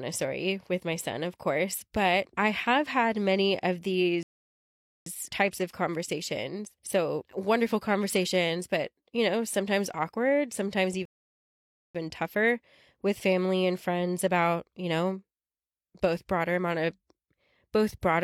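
At 4.23 s, after "have had many of", the speech drops to silence for about 0.83 s and then resumes at "types of conversations" with nothing missing; at 11.05 s, after "know sometimes awkward sometimes", a second rebuffering stall adds 0.89 s before "tougher with family and". Each time, playback ran dry and waited for more audio to arrive.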